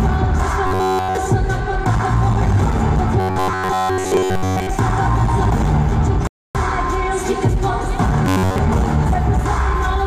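From 0.67 to 1.17 s, then 3.20 to 4.71 s and 8.25 to 8.59 s, the sound turns into a rigid metallic buzz at 93.8 Hz. This is robotic sound from repeated short buffers, likely caused by a roughly 10.7 ms slice being looped while real audio is skipped. The first stretch is entirely repeats, the later two mostly. At 6.27 to 6.55 s a rebuffering stall drops the sound to silence for about 278 ms. Unlike the buzzing stretches, it then resumes exactly where it stopped, so nothing is lost and only time is added.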